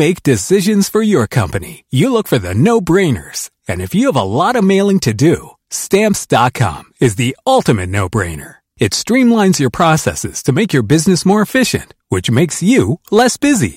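Hard clipping throughout: the speech is driven about 5 dB past what the stage can pass, so a small share of peaks flatten and crackle.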